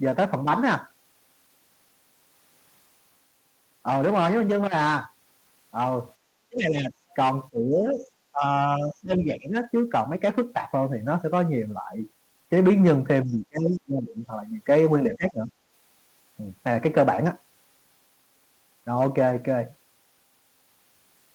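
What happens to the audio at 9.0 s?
At 9.0 s the speech dips sharply, dropping by about 15 dB, from 8.77 to 9.54 s. This is speech suppressed in double talk, likely an echo canceller turning down its own talker along with the loudspeaker echo while the far side was playing. The waveform shows a clear notch in amplitude.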